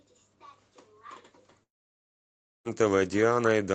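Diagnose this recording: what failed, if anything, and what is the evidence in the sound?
The network stage failed: from 1.63 to 2.68 s the speech stops, a brief concealment buzz fades to near-silence, and the speech resumes with about a second missing. That's a long network dropout, likely packets lost in transit, over an Opus path band-limited to 8 kHz.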